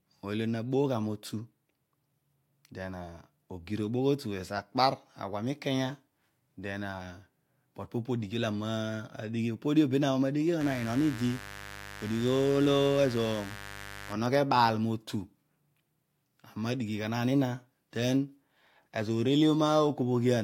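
From 10.61 to 14.13 s a mains buzz sits under the speech, a raspy 50 Hz hum well below the speech level. Switching spikes twice per mains cycle leak into the signal, giving spikes every 10 ms on the waveform and evenly spaced horizontal harmonic lines reaching several kHz on a spectrogram.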